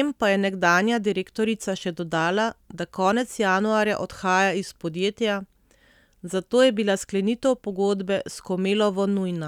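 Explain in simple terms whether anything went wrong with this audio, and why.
Nothing went wrong here: the speech recording has no audible technical problems at any point.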